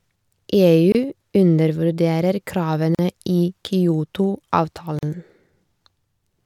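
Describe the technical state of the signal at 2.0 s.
At 2.0 s the speech signal is intact, with no audible fault at that moment.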